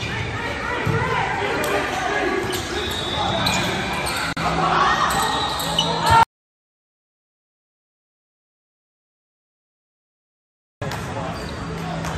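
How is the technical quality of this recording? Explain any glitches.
Two glitches interrupt the recording: a short gap at a join of encoded pieces and a long dropout to silence.

At 4.33 to 4.37 s there is a gap at a join of encoded pieces, 40 ms long. The audio was encoded in separate sections and joined without trimming, so the encoder's start-up delay and the padding in the previous section's final frame both remain in the file. The result is a brief hole in continuous sound, with edges softened by the codec, after which the sound resumes exactly where it stopped.

From 6.23 to 10.82 s there is an audio dropout to silence lasting about 4.59 s. The sound cuts off mid-flow and returns mid-flow, and the gap is pure silence with no room tone. This points to a loss of the input signal, likely a disconnected device, a failed link or an accidental mute, while recording or encoding continued writing silence. 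Whatever occurred during those seconds was not captured.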